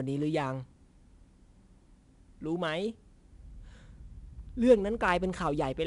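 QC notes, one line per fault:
Throughout: 4-bit ADPCM compression. The speech carries a gritty hiss that rises and falls with its level. Each sample is coded as a small step from a prediction, and the coarse steps leave broadband error that follows the loudness. Sharp attacks smear because the step size lags behind. The damage is plainly audible. Nothing sounds above about 10.6 kHz, so the top is dull. That points to roughly a 22 kHz sample rate and about 88 kbps.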